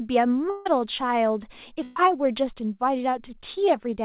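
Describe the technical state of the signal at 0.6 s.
At 0.6 s the signal is inside a gap running from 0.5 to 0.67 s, likely a long network dropout: roughly 0.16 s of audio never arrived. The receiver fills almost all of it by extending the last sound as a fading buzz or hiss, which has not yet decayed to silence when real audio resumes. The lost material is simply absent. The band stops at 4 kHz throughout, which fits a narrowband G.711-style call codec.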